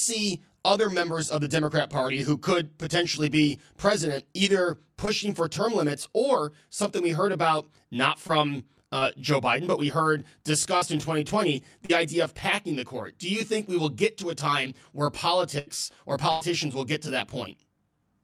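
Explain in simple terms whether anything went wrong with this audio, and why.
Three problems can be heard in this speech.

All the way through, the sound is rough or slightly doubled. This is channel delay (comb filtering): one channel runs roughly 20 ms late, and mixing the two cancels evenly spaced frequencies. Unlike a dropout, it never stops.

At 5.05, 8.27, 8.99, 10.77 and 11.85 s there is short concealed packet loss. Each time, 20 to 40 ms went missing and was quietly patched, leaving only a brief smear or wobble.

From 15.59 to 15.69 s and from 16.31 to 16.42 s there is a burst of packet loss. These gaps are longer, 80 and 100 ms. You hear a held buzz or fading hiss, and then the speech jumps ahead.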